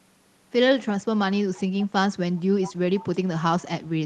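At 1.79 to 1.87 s, 2.62 to 2.72 s and 2.99 to 3.04 s, faint delayed copies of the speech surface, trailing the original by 162 ms. This is echo leak, likely from a far-end loudspeaker whose echo canceller let residue through. The echoes are quiet, weakest first and loudest second. On a spectrogram they appear as faint, shifted replicas of the preceding harmonics, all within a band that stops near 12 kHz. The waveform shows small trailing bursts.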